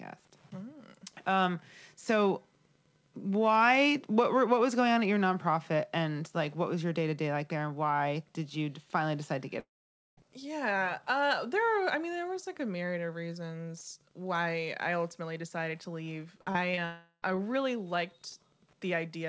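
Speech carried over a call link whose band stops at 8 kHz, as fits a G.722 stream, with two long network dropouts that are both likely caused by lost network traffic. From 9.60 to 10.19 s about 0.58 s of audio is missing: a brief fading buzz gives way to roughly half a second of silence, which shows as a blank vertical gap in the spectrogram and a flat line in the waveform. From 16.85 to 17.36 s about 0.38 s is lost, mostly covered by a smeared, decaying tone with only a short silence at the end. Just before that, from 16.41 to 16.79 s, repeated packet loss (robotic sound) punches four holes into the sound, the longest about 51 ms, with about 29% of the stretch patched. The result sounds choppy with pieces missing, and the spectrogram shows it as a striped run of blurred, stretched slices.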